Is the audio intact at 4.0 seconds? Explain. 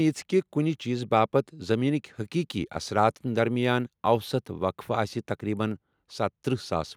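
Yes, the audio is intact at 4.0 seconds, with no fault present at that moment.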